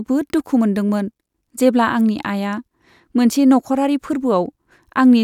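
Speech recording, no technical faults detected anywhere in the clip.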